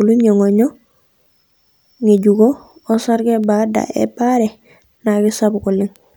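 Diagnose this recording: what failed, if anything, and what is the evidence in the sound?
The digital link between devices has a clocking problem: word clock ticks. Across the speech, from 0.28 s to 5.96 s, there's a row of sharp ticks of uneven strength, around ten of them, at roughly 0.7 s intervals. That steady spacing is the giveaway. The receiving end is free-running rather than locked to the sender, so each time the two clocks drift a sample apart, one sample gets dropped or doubled. That's a mismatch of a few tens of ppm.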